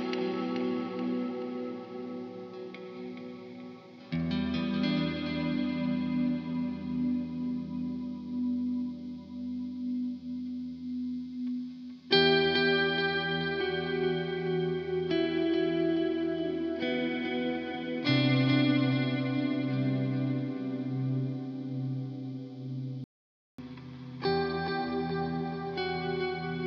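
Near the end, at 23.04 s, the audio drops out to dead silence for about 0.54 s until 23.58 s, with no room tone at all, so whatever was there is simply gone. That's an audio dropout to silence, likely a lost input while the recorder kept writing silence.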